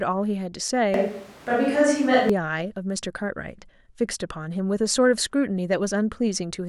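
From 0.94 s to 2.3 s the speech suddenly turns roomy and hollow, thinner in the bass, with little change in level and room noise rising to roughly 25 dB below the speech. This is likely a switch to a distant microphone, before the close one returns abruptly.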